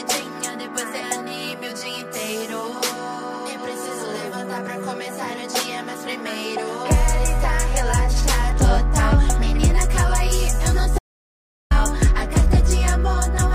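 At 10.99 s the audio cuts off abruptly into dead, complete silence with no room tone, and resumes mid-flow at 11.71 s, so about 0.72 s of sound is simply missing. This audio dropout to silence likely comes from a momentarily lost input, with silence written in its place.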